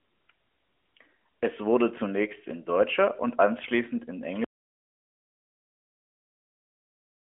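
The audio input was likely lost from 4.44 s onward, with the recorder still writing silence, so this speech clip falls into audio dropout to silence for its final stretch. The speech breaks off mid-flow into dead silence with no room tone, and nothing returns before the end. Before the cut, the AMR narrowband mobile codec path is audible in the narrow telephone band, with nothing above about 3.5 kHz.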